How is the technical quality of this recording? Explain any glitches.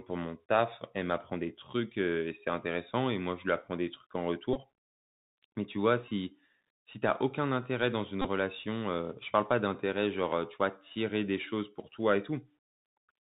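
The recording has two faults: narrowband Bluetooth headset coding throughout, plus three short repeated-packet glitches.

Throughout, the Bluetooth CVSD headset codec is plainly audible. Its one-bit delta coding, consistent with 64 kbps CVSD, cuts everything above 4 kHz, roughens sibilants and leaves granular hiss under the speech.

At 4.53–4.57 s, 6.08–6.11 s and 8.22–8.29 s, the Bluetooth headset packet repeated. Lost packets were replaced by re-decoding the previous one, giving a brief buzz near 267 Hz lasting 18.8 ms, 26.2 ms and 26.2 ms.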